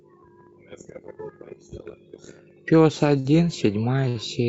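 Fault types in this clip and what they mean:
Short stall from a late packet: packets arrived late, the jitter buffer ran dry, and the receiver stretched the last sound to bridge each gap, by 53 ms at 3.19 s and 66 ms at 4.09 s. Nothing is lost, but each sound hangs on unnaturally long.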